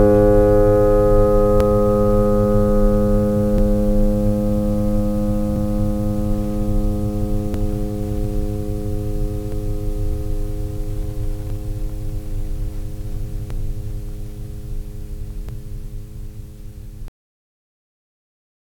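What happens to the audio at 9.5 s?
Two stream segments overlap in time around 9.52 s, and the player trims a few milliseconds of the music away, so the waveform jumps, heard as a tiny skip.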